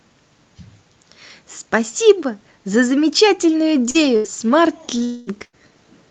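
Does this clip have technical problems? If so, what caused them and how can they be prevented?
Yes. Repeated packet loss (robotic sound) runs from 3.90 to 5.55 s. Three gaps, the longest 82 ms, are each patched by stretching the previous sound, so about 12% of that span is concealed and comes out choppy, with pieces missing. A larger jitter buffer, forward error correction and a steadier network connection would prevent this.

From 5.04 to 5.29 s, a stretch of about 0.22 s is replaced by a continuation of the preceding sound that fades as a buzz or hiss instead of dropping to silence. A long network dropout is the likely cause, with the missing audio never arriving. A more reliable link, such as a wired connection instead of congested Wi-Fi, would prevent it.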